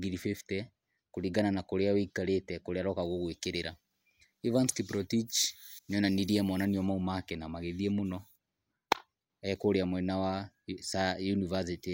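From 3.02 to 6.65 s, before "make na", the speech turns thin and sibilant. This is pre-emphasis left on: the treble sits about 13 dB high at 10 kHz, never cut back.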